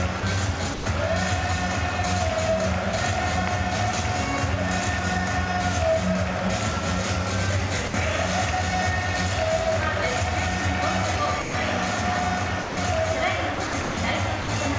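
Sound dropped by the voice detector comes first, likely because the sender's detector mistook the signal for background and stopped transmitting. Steady comfort noise fills each gap: at 0.20 s (30 ms), 0.74–0.86 s, 7.88–7.94 s, 11.42–11.54 s and 12.62–12.77 s. From 13.55 to 13.97 s the sound is chopped by the voice detector as it likely toggled repeatedly. About 240 ms is swapped for synthetic fill, leaving the passage choppy. One final 60 ms drop into comfort noise follows at 14.42–14.48 s.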